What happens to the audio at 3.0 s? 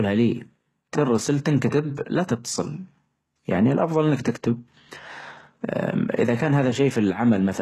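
At 3.0 s you're hearing the same thing that runs through the whole clip: the treble has a synthetic, metallic sheen, s sounds come out gritty and lispy, and nothing reaches above about 12.3 kHz. That's likely HE-AAC compression, and at a very low rate, something like 16 kbps. Only the lower band is really coded; the top end is rebuilt by copying lower bands upward under a coarse envelope, so its harmonics don't line up with the real ones.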